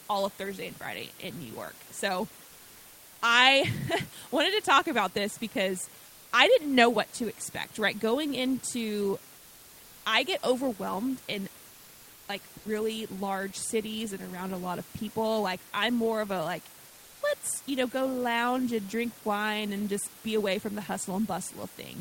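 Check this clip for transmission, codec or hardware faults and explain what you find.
Two faults of the discontinuous-transmission kind are audible in this speech clip, both pointing to a voice detector in the send path.

From 6.05 to 6.31 s, between "talk about this because" and "I didn't know what", the room background, which sits about 25 dB below the loud parts of the speech, turns into comfort noise in place of the background for about 260 ms. The likely cause is Opus DTX: the sender judged the pause silent and stopped sending, and the receiver generated a smooth, featureless hiss in its place. That hiss is about 1 dB quieter than the real room noise and lacks its texture, so the pause sounds briefly flat before the genuine background returns with the speech.

At 12.57 to 12.65 s, just before "large cities and around", there is sound dropped by the voice detector. About 80 ms is replaced by synthetic noise, and roughly 60 ms of real sound is lost within it. 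The likely mechanism is again Opus DTX: low-level sound at that point fell under the detector's threshold, so transmission paused and comfort noise filled the gap. This leaves a short clipped hole in the audio until the detector triggers again and the phrase resumes.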